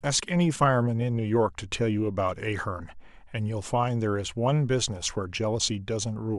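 No faults to report: nothing in this speech recording points to a problem in capture, processing or playback.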